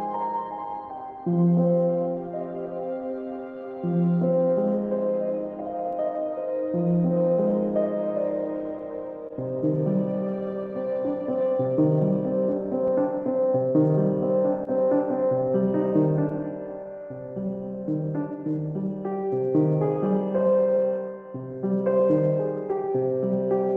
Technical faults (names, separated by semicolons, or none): clock drift between sender and receiver; repeated timing corrections; scattered short gaps